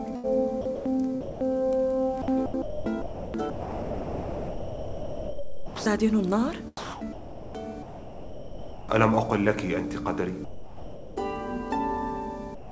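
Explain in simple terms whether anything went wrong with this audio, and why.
Sound chopped by the voice detector, from 0.16 to 1.44 s, 2.22 to 5.86 s and 6.77 to 8.89 s: the audio keeps breaking up, with pieces swapped for a hiss-like fill, most likely because the sender's detector kept switching on and off and sent comfort noise for quieter parts.

Sound dropped by the voice detector, at 10.45 to 11.17 s and again from 12.55 s to the end: the sound gives way to steady, even noise, most likely because the detector judged it to be background, stopped sending, and the receiver filled the gap with comfort noise.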